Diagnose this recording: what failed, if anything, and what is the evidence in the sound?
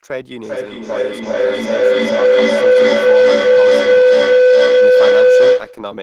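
A feedback howl runs from 0.39 s to 5.97 s: a tone near 500 Hz swells to about 15 dB over the speech, with the loop repeating roughly every 400 ms. The call path is looping through a second device in the room, and each mic-to-speaker trip adds gain.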